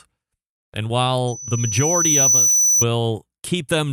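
Loudspeaker feedback squeal runs from 1.27 to 2.85 s in this speech clip, a single tone at 6 kHz that swells over roughly a second until it sits a little above the level of the speech. A microphone is hearing the loudspeaker it drives, and at 6 kHz the gain around that loop has passed unity, so the tone feeds on itself and keeps rising until the loop is broken.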